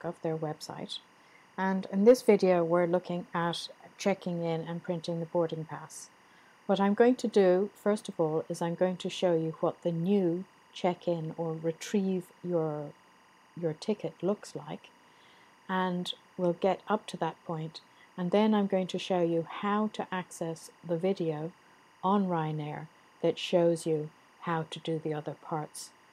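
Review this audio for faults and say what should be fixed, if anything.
Timecode bleed runs throughout: a 24 frames-per-second square-wave code chirps faintly near 1 and 2 kHz, roughly 35 dB down, showing as steady spectrogram bands. Isolate timecode tracks and cables from audio paths and check for crosstalk before recording.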